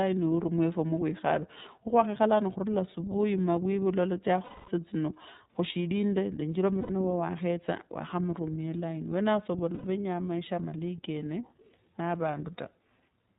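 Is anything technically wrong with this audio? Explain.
Yes. Throughout the speech there is a narrowband, slightly rough and synthetic quality, with nothing audible above 4 kHz. This is the iLBC codec at work. It discards the upper band and rebuilds each frame's excitation on its own, without borrowing from the previous frame. The damage is plainly audible, and the character fits iLBC's 30 ms, 13.33 kbps mode.

There are also three short dropouts from lost iLBC frames, at 4.43 to 4.68 s, 6.80 to 6.90 s, and 9.75 to 9.84 s. In each one the speech turns into a held, buzzy, somewhat breathy vowel, and the first gap, lasting about 240 ms, audibly fades before normal speech returns. The decoder fills each missing stretch by repeating the last pitch cycle mixed with noise. Because iLBC frames stand alone, the speech snaps back cleanly right after each gap.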